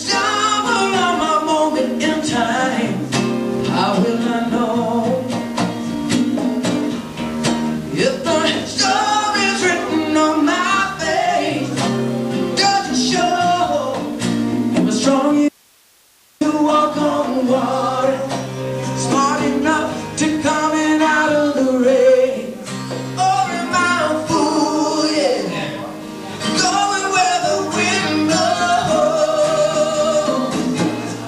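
At 15.49 s the sound cuts out abruptly. This is an audio dropout to a faint residue. It lasts about 0.92 s, until 16.41 s. The gap is not silent. It holds only hiss, about 35 dB below the normal signal level. The wanted signal was likely lost upstream while the path after the break stayed live. The return is just as sudden. It does not sound like a pause or a fade.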